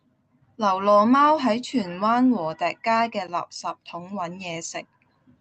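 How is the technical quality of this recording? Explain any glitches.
There are no glitches in this speech recording. The call path it went through works as expected, and its codec limits the audio to 8 kHz, which fits a wideband call setting.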